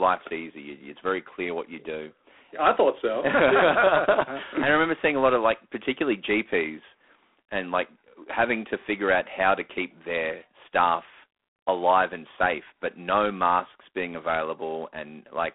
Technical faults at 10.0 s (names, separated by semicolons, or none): G.726 ADPCM